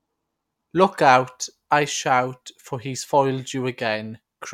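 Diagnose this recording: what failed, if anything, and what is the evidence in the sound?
Nothing in the signal chain has failed: the speech arrives intact at every stage from capture to playback, leaving no audible disturbance to trace.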